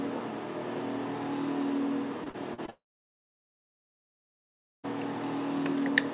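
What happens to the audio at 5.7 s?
Nothing goes wrong at 5.7 s; the audio runs on intact through that moment, with only the band limit of the call path, nothing above 4 kHz, as you'd expect from a G.711 A-law link.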